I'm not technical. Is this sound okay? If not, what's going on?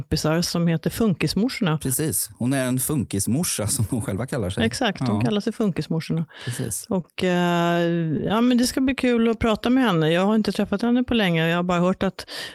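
No. Repeated stalls (stutter) from 7.01 to 7.77 s: the sound arrived late five times, so the player stretched the last bit, adding 61 ms and making it stutter.

Scattered short gaps from 8.17 to 9.65 s: about ten tiny pieces arrived late, each patched by continuing the previous sound, leaving brief ticks and hiccups.

Jitter buffer slow-down from 9.06 to 10.41 s, just before "träffat henne på länge": the player repeated tiny bits to rebuild its reserve, so speech runs at 92% speed, 108 ms longer.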